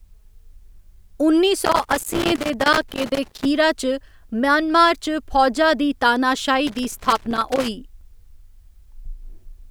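A speech recording with loose connector crackle from 1.65 to 3.45 s and 6.67 to 7.68 s: a worn contact intermittently breaking the signal, producing irregular scratchy bursts.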